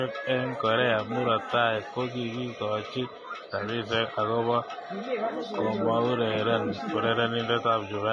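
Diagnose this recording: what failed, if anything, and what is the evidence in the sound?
The fault sits at the codec stage. Throughout the speech, nothing is heard above 10.6 kHz, and the treble is hissy and grainy. Consonant attacks are smeared. This is likely heavy Vorbis compression, which fits a low bitrate around 28 kbps. Coarse quantisation turns fine high-frequency detail into noise.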